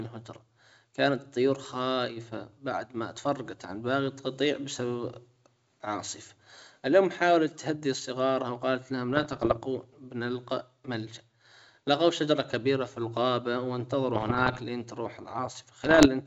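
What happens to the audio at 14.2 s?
A cluster of pops and rough, gritty bursts with brief jumps in level runs from 14.15 to 14.61 s, between "شجرة كبيرة في الغابة" and "لين تروح". These are bit errors on an ADPCM link, at around one percent on the G.722 stream. Each flipped bit throws off the decoder's step size and predictor, so the damage rings on for milliseconds.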